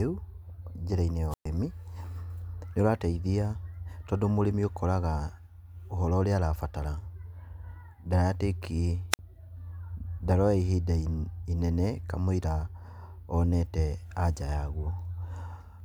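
At 1.30 to 1.46 s and again at 9.11 to 9.19 s the speech suffers a wireless microphone squelch dropout: the radio link from an analogue FM transmitter weakens, a short surge of hiss rises, and the receiver's squelch gates the output to near silence for about 116 ms and then about 53 ms. That brief swell of static before the hole separates it from a digital packet dropout, which cuts off abruptly without any preceding noise.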